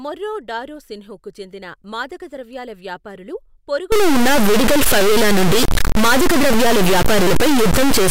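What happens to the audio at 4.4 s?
At 4.4 s the speech sits inside a stuck bit fault that begins at 3.92 s, right after "రోసిన్హ్కు చెందిన మాదకద్రవ్యాల వ్యాపారులు", and runs to the end of the clip. One sample bit, likely held high or low by a broken line or converter, shifts about half the values by a large step of roughly -10 dBFS. The result is harsh, buzzy distortion, and even the pauses fill with noise, unlike clipping, which only distorts the loudest peaks.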